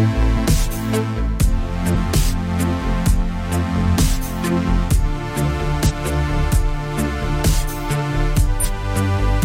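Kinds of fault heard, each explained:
Damaged data in a compressed stream: corrupted bytes make the decoder misread frames and lose sync until the next frame header, producing brief glitches of about 50 to 60 ms at 0.33, 1.91, 5.86 and 8.6 s.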